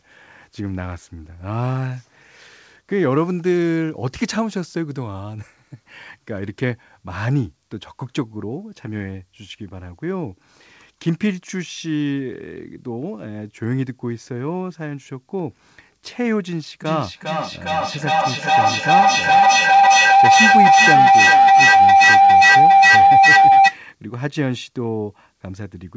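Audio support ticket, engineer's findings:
Feedback howl, 16.82–23.86 s: tone near 700 Hz, peaking about 10 dB over speech, loop repeating roughly every 0.4 s; spectrogram shows narrow band thickening, waveform swelling. Mic-to-speaker loop gaining each pass. Call band ends at 8 kHz.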